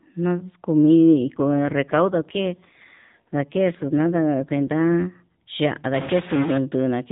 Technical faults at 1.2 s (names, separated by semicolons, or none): AMR rate drop